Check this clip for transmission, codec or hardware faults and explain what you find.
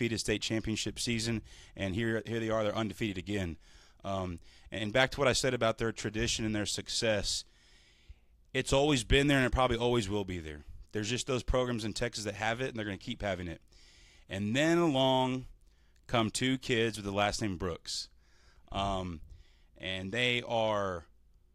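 Nothing stood out on listening to this speech recording.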